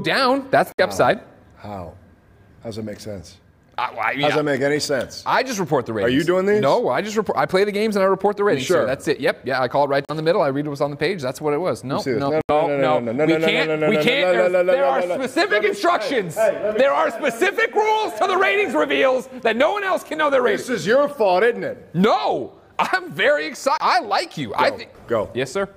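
The sound drops abruptly to silence four times and then resumes, at 0.72 s for about 63 ms, at 10.05 s for about 39 ms, at 12.41 s for about 80 ms, and at 23.78 s for about 27 ms. Each gap is a clean hole rather than a fade. These are likely Bluetooth stalls: interference delayed the wireless packets, the headphones' small playback buffer emptied, and output paused until the resent data arrived.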